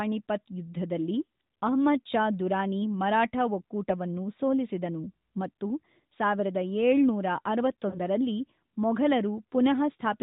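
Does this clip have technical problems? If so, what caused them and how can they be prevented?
Yes, there are lost AMR speech frames in two places. At 2.05 s there's a brief dip or warble just before "ಷಾ ದುರಾನಿ ಮರಾಠ ಒಕ್ಕೂಟವನ್ನು", the size of a single 20 ms frame. From 7.90 to 8.00 s there's a longer smeared, fading patch, about 40 ms of concealed audio. The damaged frames failed their checksum, so the narrowband decoder padded the gap by repeating the last good pitch and vocal tract settings at falling gain. To prevent it, improve radio link quality or add stronger channel protection and redundancy so fewer frames arrive corrupted.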